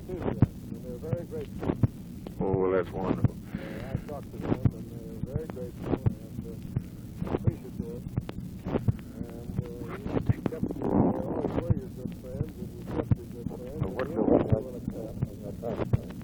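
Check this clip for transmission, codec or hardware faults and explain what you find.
One hardware fault runs through the whole clip. An unreliable data bit is heard from start to end: a marginal data line flips one bit in random samples, each error adding a spike of about -42 dBFS, giving a steady crackle that persists through pauses.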